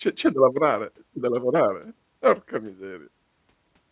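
No technical faults are audible.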